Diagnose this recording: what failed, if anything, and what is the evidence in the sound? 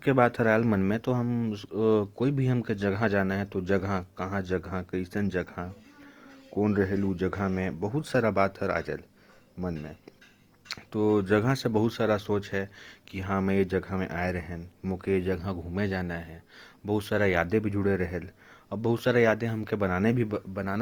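Codec stage: the speech sounds grainy and rough throughout, with bands noise-filled rather than hollowed up to 20.2 kHz. That's likely Opus compression in CELT mode, which fits 24 kbps.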